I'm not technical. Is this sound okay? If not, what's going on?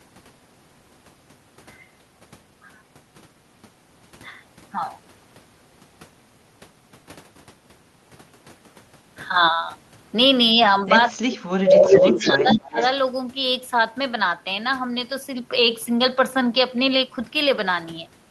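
No. At 10.54 to 10.61 s the voice dips briefly. From 11.1 to 12.78 s it nearly cuts out. This is speech suppressed in double talk, likely from both sides talking at once.

From 11.84 to 12.6 s you hear an echo leak: the voice repeats about 0.3 s later, louder than the original. A fainter echo follows at 12.78 to 12.9 s. The likely cause is a speakerphone sending its own sound back.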